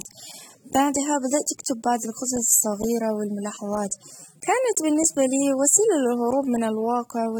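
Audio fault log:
Throughout: AAC compression. The speech carries plainly audible codec damage across the whole clip, with a smeared, warbling texture where the encoder has coarsely quantised the spectrum to fit its bit budget. Content stops at about 19.2 kHz, so the band limit is not what dulls it. The damage lies in the coded bands themselves. The likely cause is AAC-LC encoding at a low bitrate, which fits a rate of roughly 27 kbps.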